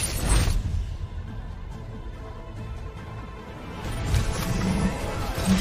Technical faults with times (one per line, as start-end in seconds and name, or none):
none